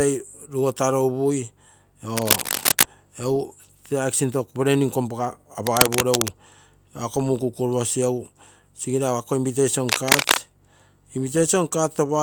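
Cable scratch noise hits the speech at 2.17–2.84 s, 5.67–6.31 s and 9.89–10.39 s. Each burst is a dense, uneven rustle. The first and last sit slightly above the speech, the middle about level. A worn cable or connector being moved is the likely cause.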